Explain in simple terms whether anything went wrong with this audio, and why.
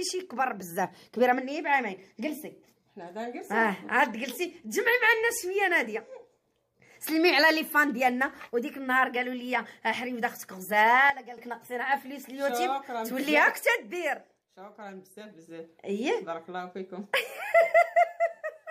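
Something did go wrong, briefly. From 11.10 to 11.38 s the whole sound suddenly drops to a noticeably quieter level, then comes back. This is a sudden gain jump, likely caused by a volume setting being applied instantly instead of being smoothly ramped. Unlike a gradual fade or a dropout, the level changes abruptly, and the background noise falls along with the main sound instead of vanishing entirely, so everything simply gets quieter at once.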